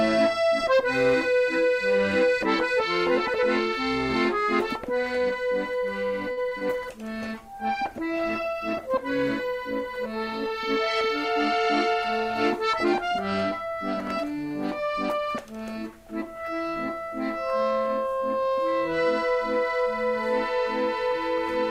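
At 6.31 to 6.39 s, a short stall from a late packet: the jitter buffer ran dry, so the last sound is held for 56 ms, then resumes without any loss.

At 6.49 to 6.53 s and 6.59 to 6.63 s, short concealed packet loss: about 20 ms went missing each time, and the gap is bridged with synthesized continuation, heard as brief smears.

From 6.88 to 13.24 s, a call bitrate drop: the encoder fell from 64 to 20 kbps, sitting at the lowest rate for about 5.1 s, so the sound turns coarse, watery and dull.

From 11.34 to 11.88 s, a jitter buffer speed-up: the receiver trimmed about 50 ms of excess delay, so the audio plays at 106% speed with unchanged pitch and sounds hurried.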